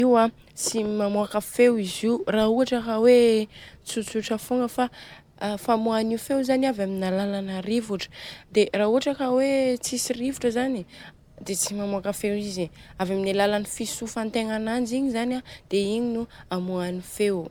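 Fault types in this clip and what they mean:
Generation loss: the speech carries a swirling, smeared, hollow quality heavier than a single lossy pass would leave, with consonant attacks blurred and spectral holes throughout. The likely cause is repeated decode and re-encode, here pointing to MP3 at around 128 kbit/s applied roughly seven times. Each pass requantises on a shifted frame grid, so noise and gaps stack up. Content stops at 20 kHz.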